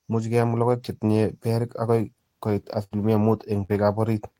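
At 2.83 s a burst of packet loss removes about 80 ms of the speech, and the region from 2.83 to 2.97 s is disturbed. The receiver had nothing to decode for that stretch, so it generated roughly 81 ms of substitute audio by extending the last sound it held and attenuating it as the gap continued. This is heard as a held, decaying tail, after which the speech resumes later than it should, with the intervening portion gone.

At 3.64 s a short concealed packet loss affects the span to 3.71 s. Around 40 ms of the speech failed to arrive in time, and the decoder covered it with about 43 ms of extrapolated signal, carrying the preceding sound forward before cross-fading back into the received stream. Being so brief, it comes across as a quick smear or wobble rather than an audible gap.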